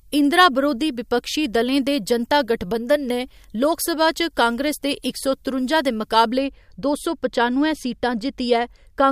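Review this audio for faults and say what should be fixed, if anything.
From 0.00 to 6.38 s the speech carries pre-emphasis left on: the treble lift applied before recording or transmission was never undone by the matching de-emphasis. The top end stands about 11 dB higher at 10 kHz than at 1 kHz, a shape that fits the 50 µs FM curve. The result is thin, bright and hissy sibilance until just before "दो सौ पचानुए", where the balance returns. Fix this span by applying the complementary 50 µs de-emphasis. To prevent it, make sure every pre-emphasised source passes through the corresponding de-emphasis stage before it is captured or mixed.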